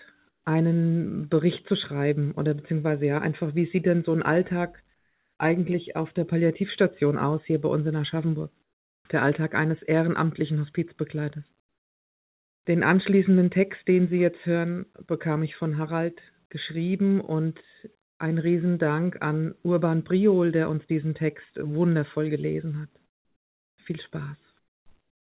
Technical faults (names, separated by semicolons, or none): comfort noise in place of the background